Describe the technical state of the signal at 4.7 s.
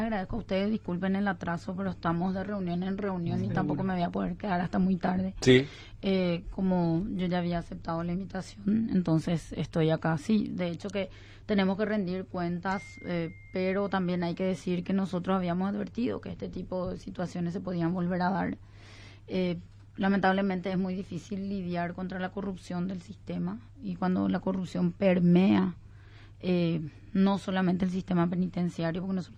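At 4.7 s the call is in a bitrate drop lasting from 1.48 to 7.39 s: the bandwidth estimate collapsed and the encoder was starved of bits, coding far more coarsely and trimming the top end. The sound turns rough and muffled, consistent with a fall from about 128 to 19 kbps.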